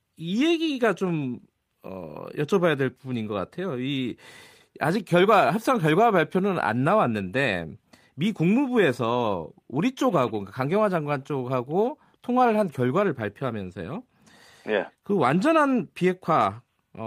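No technical faults can be heard anywhere in the recording; the signal stays continuous and stable throughout.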